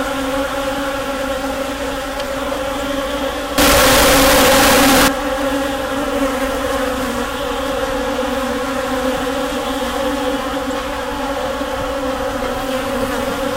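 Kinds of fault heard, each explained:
Float read as integer, 3.58 to 5.08 s: the sound turns very loud and harsh, its waveform nearly square at an almost fixed, high level, with quiet background raised to match the main sound. The likely cause is 32-bit float samples read as 32-bit integers, so sign and exponent bits set each level.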